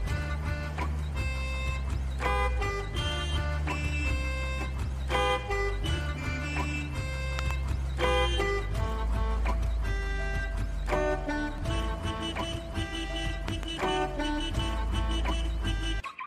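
At 7.39 to 7.53 s and again at 13.48 to 13.65 s, a loud pop lands as a quick double thump, far above the audio (very roughly 20 dB, then 15 dB). A voltage pulse from a plug, switch or static is the likely cause. Unlike a dropout, the sound continues underneath.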